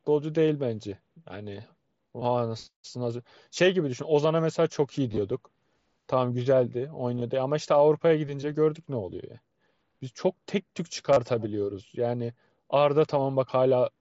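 Concealed Bluetooth headset packet loss hits at 2.19, 5.12, 7.18 and 11.13 s. Lost packets are patched by repeating recent waveform. Each spot gives a brief buzzy flutter.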